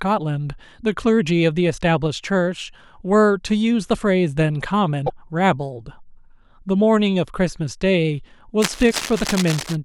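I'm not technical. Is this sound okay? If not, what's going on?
No. Two things go wrong in this speech recording.

The first is most likely a broken MP3 bit reservoir. An MP3 file is built from tiny frames about 26 ms long, and each frame can store part of its data in the frames before it. If a few frames are lost, the next one looks back for its data and finds the wrong bytes. Here that causes brief glitches from 5.06 to 5.10 s and again from 8.90 to 8.93 s. The speech skips forward and a short chirp, burst of noise or gap replaces it.

The second is most likely cable scratch noise. A worn cable, plug or control was probably moved, so the electrical contact kept changing rapidly. From 8.62 to 9.76 s this adds a rough scratching, rustling sound over the speech, and the second MP3 glitch falls inside this stretch.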